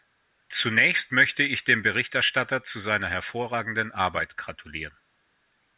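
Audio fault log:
No faults detected in this clip.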